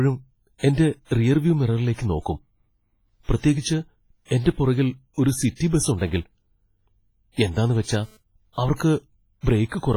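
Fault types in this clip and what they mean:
WMA compression: Heavy ringing, washy smear with hiss that breathes along with the speech throughout, likely from WMA transform coding at a low bitrate around 24 kbps.
GSM phone buzz: A raspy 217 Hz buzz from a nearby phone's data bursts, coming and going from 7.68 to 8.17 s, about 32 dB below the speech.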